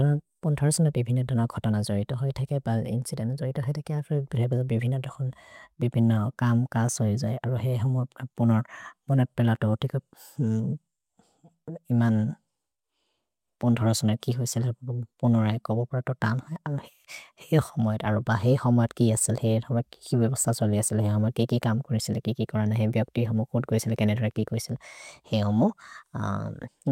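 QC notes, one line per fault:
No faults found in this speech clip.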